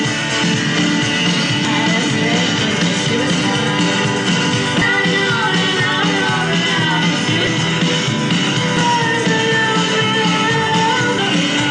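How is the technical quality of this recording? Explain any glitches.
The recording has three brief glitches, all damaged data in a compressed stream, at 1.65 to 1.68 s, 4.82 s and 11.18 s. Corrupted bytes make the decoder misread frames and lose sync until the next frame header. Unlike a plain dropout, each disturbance is decoder garbage or a short hole, tied to frame boundaries.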